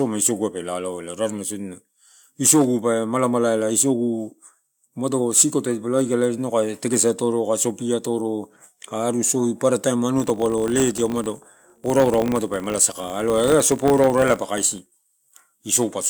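Speech with a 50 Hz buzz from 10.16 to 15.43 s. A filter restarted on every block is re-initialised every 20 ms, and unlike mains hum, the buzz rises and falls with the speech level.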